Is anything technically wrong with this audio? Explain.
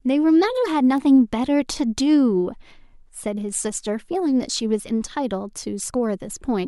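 Yes. At 0.98 s in this speech clip there is one sharp, broadband tick, unrelated to the speech around it. It is a bit error spike: a single flipped bit threw one sample's value off by a power of two, peaking at about -19 dBFS, before the next sample returned to normal.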